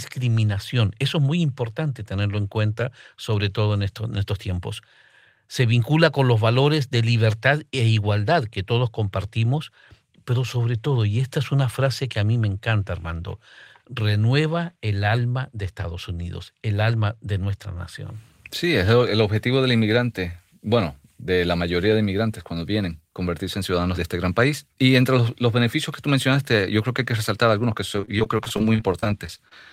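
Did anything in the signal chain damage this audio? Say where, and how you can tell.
Yes. From 27.96 to 29.52 s the speech turns choppy and robotic. This is repeated packet loss on the network, with short dropouts of up to 31 ms patched by extending the preceding sound.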